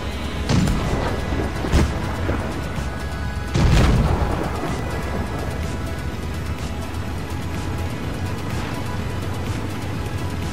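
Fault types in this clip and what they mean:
Dropped buffer (overrun): at 0.33 s, 4.79 s and 6.3 s the sound jumps abruptly, and nothing fills the gap. Each jump skips only a sliver of the audio, a few milliseconds, with the one at 4.79 s roughly twice as long as the others. This is likely an overrun, where the recording side failed to collect a block of samples before the hardware wrote over it, so the audio on either side is spliced straight together.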